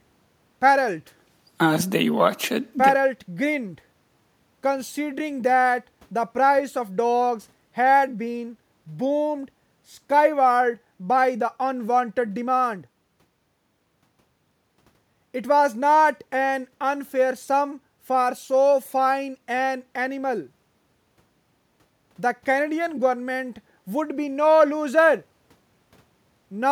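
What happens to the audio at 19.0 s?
Nothing goes wrong at 19.0 s: the speech runs on there without any audible fault.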